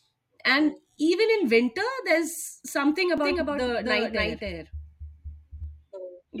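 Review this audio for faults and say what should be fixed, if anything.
From 3.18 s to 5.64 s, right after "there's something", there's a doubled audio track: a second, dry copy of the speech trails the original by roughly 0.3 s, around 5 dB quieter, and cuts in and out abruptly. It's likely a second capture path or an edit leaving two offset copies. To prevent it, make sure only one input path feeds the mix and check edits for overlapping duplicate regions.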